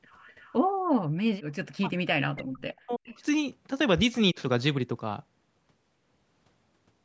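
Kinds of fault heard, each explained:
Echo leak: A faint, delayed copy of the speech trails the talker by about 0.33 s, sitting roughly 30 dB below it, at 0.12 to 0.54 s and again at 3.04 to 3.15 s. This is likely the far end's loudspeaker sound slipping past its echo canceller and being sent back.
Speech suppressed in double talk: The speech dips by about 15 dB at 1.81 to 1.94 s, then is pushed down hard, almost to silence, for about a second between 2.11 and 3.21 s. This is likely an echo canceller mistaking overlapping talk for echo and turning everything down.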